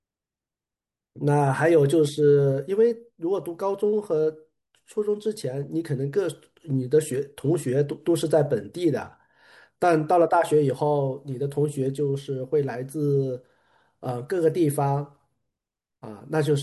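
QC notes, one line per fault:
Nothing in this speech clip calls for a fault line. There are no times or events to log.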